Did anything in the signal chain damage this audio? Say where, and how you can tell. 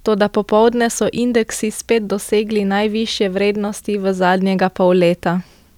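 No, nothing in the signal chain damaged this audio.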